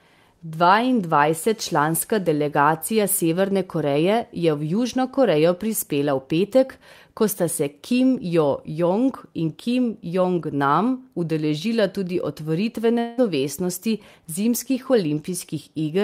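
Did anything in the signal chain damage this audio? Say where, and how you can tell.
Yes, a long network dropout at 12.99 to 13.19 s. Speech smears into a fading buzz, then resumes with 180 ms lost. Likely missing packets.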